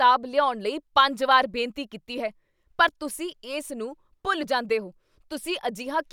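Nothing in the recording stood out as a technical fault on listening.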